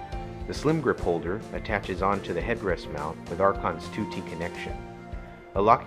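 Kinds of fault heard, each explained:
No technical fault can be heard anywhere in this audio. Nothing in it calls for a fault explanation.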